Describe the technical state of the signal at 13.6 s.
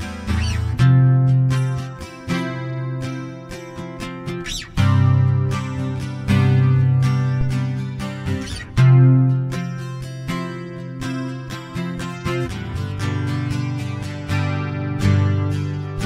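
At 13.6 s the signal is intact, with no dropout, click, distortion or other audible fault at that point.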